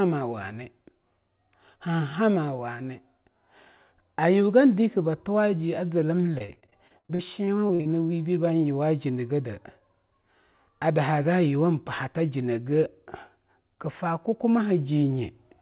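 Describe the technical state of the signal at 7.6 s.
Repeated packet loss (robotic sound) runs from 6.38 to 7.87 s. Fourteen dropouts, up to 57 ms, are filled by extending the preceding sound, making the speech choppy with pieces missing.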